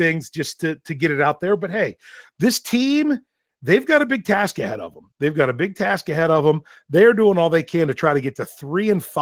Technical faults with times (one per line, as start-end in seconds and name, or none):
0.00-9.21 Opus voice compression